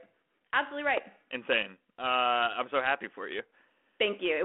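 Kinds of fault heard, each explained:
Bit errors on an ADPCM link: from 0.94 to 1.01 s, a brief rough burst with pops and a jumpy level breaks into the band-limited speech. Each flipped bit knocks the decoder's step size and predictor off track, so the damage rings on rather than clicking once.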